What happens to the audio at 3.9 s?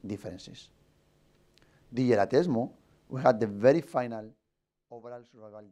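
At 3.9 s there is zipper noise, from 3.64 to 4.76 s: the level falls by roughly 20 dB in unsmoothed steps, about fifty a second, ticking audibly, unlike a smooth fade.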